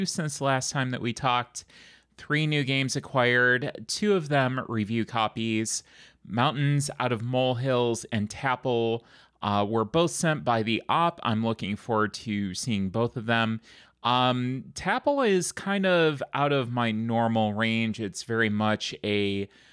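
Nothing goes wrong anywhere in this recording of speech, so there's no fault to point to at any moment.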